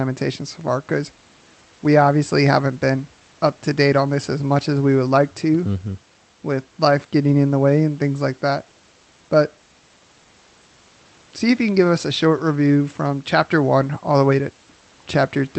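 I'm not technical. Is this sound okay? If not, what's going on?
Yes, this speech recording is fine, with nothing going wrong in it. It has the slightly narrower sound of an ordinary internet call, which trims off the very highest tones above about 8 kHz, and a faint background noise of the room sits well underneath.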